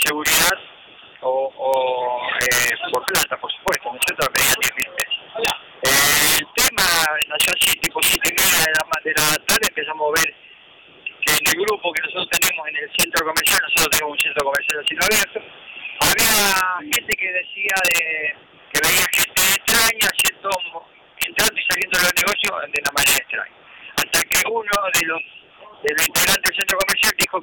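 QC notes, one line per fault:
throughout: integer overflow. The signal's been pushed about 12 dB past full scale, and instead of being limited, the peaks wrap straight round to the opposite sign. Only a few percent of samples go over, but each one jumps across the whole range, so every loud moment cracks violently. It's a much harsher, spikier sound than ordinary clipping, because the waveform snaps to the far extreme rather than flattening at the top.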